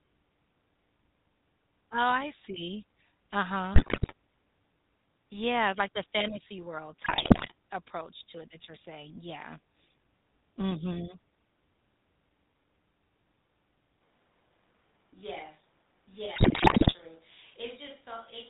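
Throughout, the speech has passed through the GSM full-rate codec, whose pulse-excited vocal-tract model and 4 kHz ceiling leave a plainly audible buzzy, gravelly roughness, which fits the 13 kbps GSM full-rate codec. From 3.74 to 4.13 s, GSM bit errors corrupt the decoder's filter, pitch and gain values, and the speech breaks into squawks and gargling pops. The same GSM bit errors return from 7.04 to 7.52 s, between "like the fantasy world" and "approach to what that". At 14.02 s the close microphone likely dropped out, leaving a switch to a distant microphone: the sound turns suddenly roomy and hollow, thinner in the bass, about 10 dB quieter, with room noise well below the speech, and stays that way to the end. Within that stretch, GSM bit errors strike again from 16.36 to 16.96 s, with heavier squawking.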